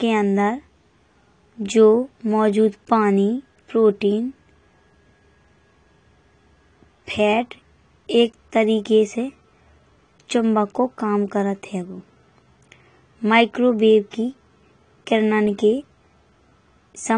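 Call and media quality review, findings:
AAC compression, whole clip. Encoder quantising too coarsely and low-passing everything above 10 kHz, likely a low-bitrate AAC-LC stream around 32 kbps. Speech sounds dull and band-limited, with sibilants smeared into a fizzy, warbling texture. Damage plainly audible.

Pre-echo, 14.11 to 14.13 s. The transform block spreads quantisation noise sized for a sharp attack back across the quiet stretch before it, so a 21 ms wash of hiss leads the onset. The attack itself sounds softened and blurred.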